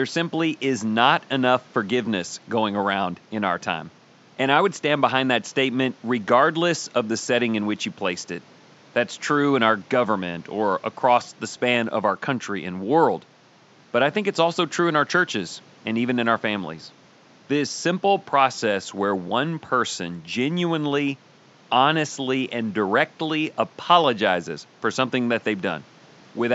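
No technical faults are audible.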